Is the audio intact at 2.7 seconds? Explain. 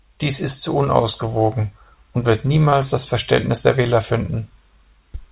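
No, there is short concealed packet loss at 2.70 to 2.74 s, just after "zu unausgewogen und wird": about 20 ms never arrived and was filled by extending the preceding sound, heard as a brief smear. On a spectrogram it shows as a short, smoothed patch of repeated harmonics or noise that blends back where real audio resumes.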